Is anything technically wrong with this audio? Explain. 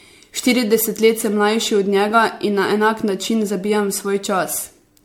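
Yes. Throughout the speech there is generation loss: a swirly, hollow, smeared sound with softened consonant attacks, likely from around ten rounds of MP3 re-encoding, fitting 96 kbit/s. Each pass requantises on a shifted frame grid, compounding noise and spectral holes. A spectrogram would show patchy, flickering gaps and nothing above 19.6 kHz, while the waveform's onsets look blunted.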